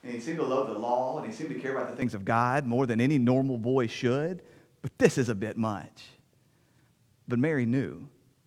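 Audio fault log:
0.00–2.02 s, switch to a distant microphone: speech starts hollow, roomy, thin and about 5 dB quieter, likely a farther microphone; tone and level snap back together at 2.02 s.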